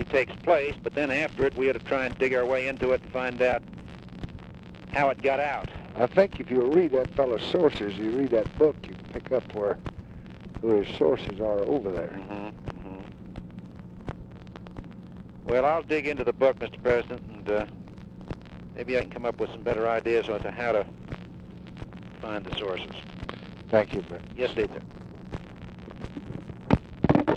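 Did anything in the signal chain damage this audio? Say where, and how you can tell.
No, nothing in the signal chain audibly damaged this audio, and no stage left a trace that can be heard in the recording.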